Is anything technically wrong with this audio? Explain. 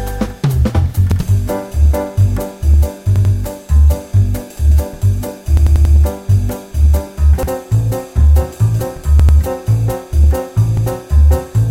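Yes: repeated buffers at 1.12 s, 3.16 s, 5.57 s, 7.43 s, 9.20 s and 10.77 s. When fresh audio arrived late, the same 93 ms piece (which fits a 4096-sample buffer) replayed once, twice or, at 5.57 s, four times. Each replay joins hard. Unlike a dropout, there is no silence or missing sound, only stuttering.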